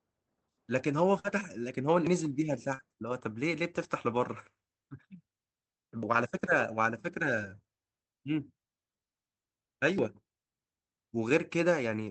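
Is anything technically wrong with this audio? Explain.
Yes, there are several separate problems, all in short patches.

Burst of packet loss, 1.19 to 1.26 s: a run of packets went missing, so the receiver stretched the last sound for about 47 ms and faded it, then jumped ahead. You hear a brief held buzz or hiss, and about 40 ms of real audio is simply gone.

Lost packet rebuilt from error correction, at 1.24 to 1.26 s, 2.79 to 2.81 s, 6.47 to 6.49 s and 7.37 to 7.51 s: the decoder played the low-bitrate backup copies that the following packets carried. There's no gap, but those stretches, 20 ms each and 80 ms at 7.37 s, sound rougher and grainier.

Audio missing between chunks, at 2.07, 6.03 and 9.98 s: these are little skips where the two sides butt together with no silence, each dropping a few hundredths of a second. The steady roughly 4-second spacing points to a recorder or processor likely losing a sliver each time it rolls over to a new chunk.

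Short concealed packet loss, 2.74 to 2.81 s: roughly 45 ms never arrived in time, so the receiver filled the hole by extrapolating the preceding sound and then blended back in. It comes across as a quick smear or wobble, with about 40 ms of the original missing.

The Opus call path at 24 kbps caps the audio at 8 kHz, so the top end sounds a bit dull throughout.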